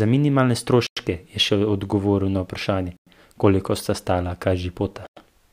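At 0.87, 2.97 and 5.07 s the speech stops for 100 ms with a gap between chunks, first just before "je še odgovoril na", then between "še odgovoril na vprašanje" and "koliko sta stala". Silence inserted at each 2-second chunk join leaves hard-edged holes.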